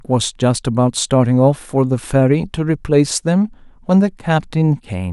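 No technical faults can be heard anywhere in the speech recording.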